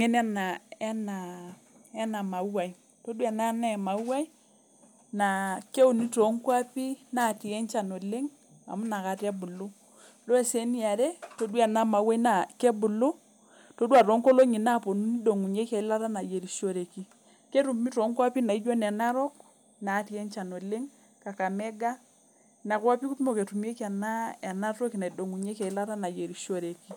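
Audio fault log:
No faults were heard in this speech recording. There is nothing to log for it.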